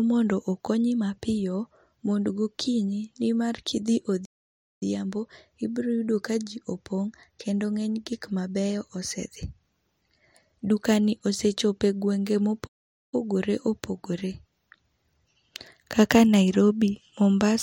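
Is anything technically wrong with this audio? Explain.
Yes. The speech has two playback stalls: at 4.25–4.83 s (0.56 s) and at 12.67–13.14 s (0.46 s), just after "osechopo e gwenge ma". Each time it cuts out abruptly and then resumes, likely because the player ran short of data or was briefly blocked. The waveform shows a flat line, and the spectrogram shows an empty vertical gap.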